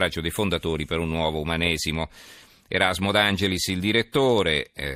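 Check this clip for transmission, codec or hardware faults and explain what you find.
A steady ticking runs under the speech for the whole clip, 25 times a second, forming a buzz that rides on the speech and drops away in the pauses. This is a resampler restarted on every block: the audio was converted from 44.1 kHz to 48 kHz in 40 ms blocks, with each block handled in isolation. At every block boundary the converter lacked the real neighbouring samples, leaving a small error that repeats at the block rate.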